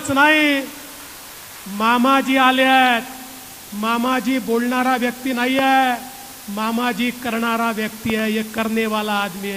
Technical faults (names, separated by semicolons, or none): low bit depth with dither; loud pop